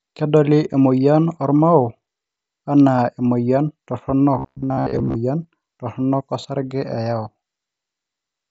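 At 0.73 s the speech has a single unconcealed Bluetooth headset packet loss. One short voice packet, about 7.5 ms of audio, was lost between headset and phone, and nothing was done to hide the gap. The missing stretch was replaced with silence or an idle pattern, so there is a brief hole with hard edges that can produce a click. It is isolated, so there is no crackle.

From 4.39 s to 5.17 s the speech turns into a robotic sound from repeated short buffers. The most likely cause is that new audio arrived too slowly and the playback path filled the time by replaying its most recent short buffer. Across this stretch, most of the audio is those repeats instead of fresh signal. The repetition imposes a steady buzz at 66.7 Hz, which fits a buffer of about 15 ms. The result is a stiff, metallic drone that only loosely tracks the speech, set against the light grain and 8 kHz ceiling of the mSBC wideband headset link.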